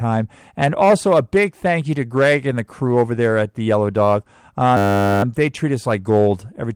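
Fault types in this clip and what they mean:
System hang loop: the playback path stalled while the audio hardware kept replaying the same short stretch of its ring buffer. From 4.77 to 5.23 s, just before "they treat us like", a 10 ms fragment repeats about 46 times, so the speech gives way to a steady buzz at 100 Hz, the loop rate. Because the buffer is so short, this sounds like a tone rather than a stutter. Little or no audio is lost once playback resumes.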